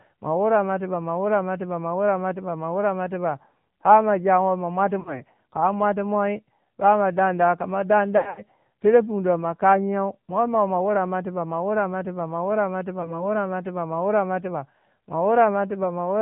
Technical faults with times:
0.00-16.22 AMR narrowband mobile codec
5.00-5.23 lost AMR speech frames
8.18-8.42 lost AMR speech frames
13.02-13.25 lost AMR speech frames

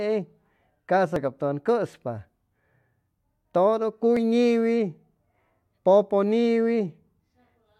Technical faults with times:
1.16 overlap between stream segments
4.17 overlap between stream segments

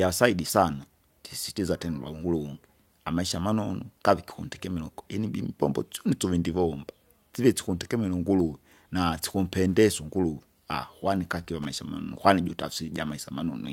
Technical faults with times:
11.62-11.65 loose connector crackle

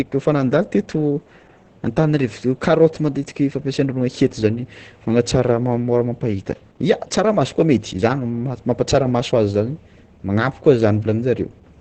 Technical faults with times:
0.00-11.81 Opus voice compression

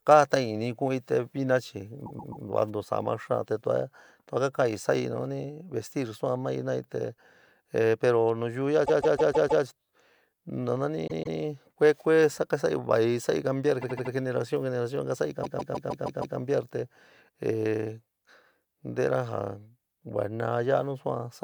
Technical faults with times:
2.05-2.44 repeated frames
8.84-9.63 repeated frames
11.06-11.38 repeated frames
13.81-14.12 repeated frames
15.43-16.37 repeated frames

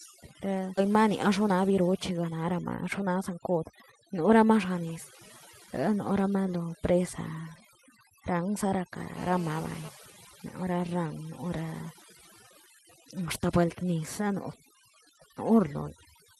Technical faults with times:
0.00-16.40 overdone noise removal
0.77-0.79 skip ahead
0.87-4.32 jitter buffer speed-up
9.17-9.89 GSM phone buzz

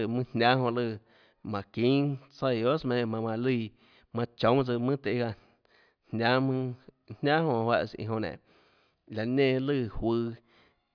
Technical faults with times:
none

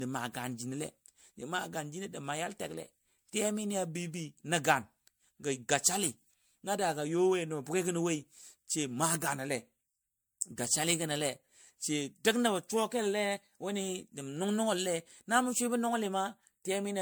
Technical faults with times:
0.00-17.01 generation loss

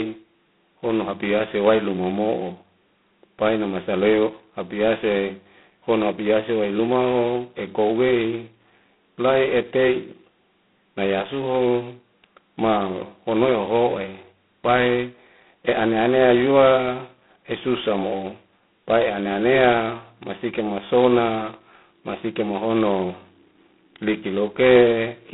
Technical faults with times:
0.00-25.33 G.726 ADPCM

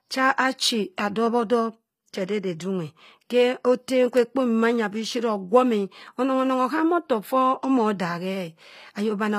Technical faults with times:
0.00-9.38 HE-AAC compression

